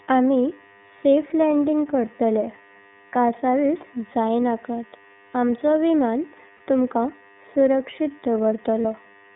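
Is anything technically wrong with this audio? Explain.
Yes. The speech runs through the iLBC codec, coding each frame independently with nothing kept above 3.6 kHz or below 150 Hz, so the voice sounds narrowband, slightly rough and synthetic.

There are two lost iLBC frames, at 6.57–6.60 s and 8.81–8.85 s. In each, the decoder fills a gap of about 30 ms, consistent with one dropped 30 ms frame, by repeating the last pitch cycle mixed with noise. It is heard as a brief held, buzzy vowel before clean recovery.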